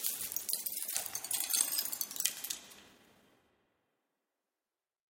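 At 0.93 to 0.95 s there is a skip ahead: playback jumps forward with no fill between the two sides, so the sound on either side is butted almost directly together. Roughly 0.7 s of audio is missing. The later audio was already queued, and the stretch in between was dropped in transit or discarded when the jitter buffer overflowed. The overall delay falls by about the same 0.7 s.

From 2.83 to 4.09 s a jitter buffer speed-up runs at 120 percent. The buffer was holding more audio than its target, so the receiver repeatedly removed short slices, each one or a few pitch periods long, to pull the delay back down. About 0.3 s is trimmed in total. Over this stretch the sound moves noticeably faster and feels hurried, while its pitch stays unchanged.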